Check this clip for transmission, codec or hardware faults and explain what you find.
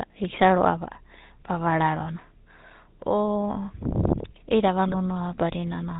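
Two faults are present: a codec coloration that lasts the whole clip, and one short burst of channel damage near the end.

GSM full-rate codec (throughout): The speech sounds buzzy and gravelly, with a plainly audible roughness and a dull top end, because nothing above 4 kHz gets through. The codec rebuilds the voice from a vocal-tract filter fed by a sparse, regularly spaced pulse train rather than the real excitation. That coarse source is what grinds through every voiced sound here. The sound fits the 13 kbit/s full-rate GSM coder.

GSM bit errors (4.88 to 4.96 s): Right after "i'ida ava", the voice briefly breaks into a gargling squawk, lasting under a tenth of a second. Corrupted bits reached the decoder, so the filter, pitch or gain values for those frames came out wrong. That bent the spectrum or pushed the level out of line. The length fits a run of about four damaged 20 ms frames, with an error rate of roughly 2 percent on a weak link.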